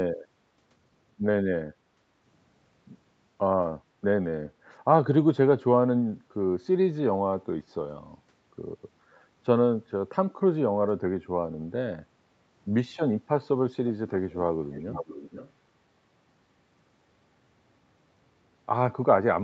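At 6.21 to 6.32 s the echo canceller pulled the microphone down hard while the loudspeaker was playing. This background gated by the echo canceller makes the room sound dip by about 9 dB for roughly a tenth of a second before recovering.

At 14.33 to 14.37 s and again at 14.71 to 15.52 s, a copy of the speech returns 479 ms late. This is likely an echo leak, with a loudspeaker-side canceller failing to remove everything its microphone caught. The first scrap is very faint, and the longer second stretch is louder, though still well beneath the speech.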